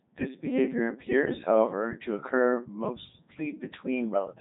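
Throughout, the speech passes through the Codec 2 vocoder at 3.2 kbit/s. Only pitch, voicing, energy and spectral shape survive, resynthesised from sine waves. The speech sounds robotic and buzzy, with nothing above 3.8 kHz.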